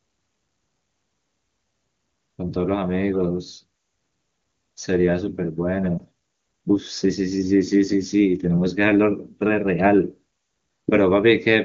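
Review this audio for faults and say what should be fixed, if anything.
A brief dip and warble in the speech from 5.98 to 6.02 s comes from lost AMR speech frames. This fits a single 20 ms frame that failed its checksum after radio errors. The AMR-WB decoder bridged the gap by repeating the last good pitch and vocal tract settings at reduced gain, and the audio around it stays clear. Stronger error protection on the radio link or better coverage would keep frames from failing and prevent this.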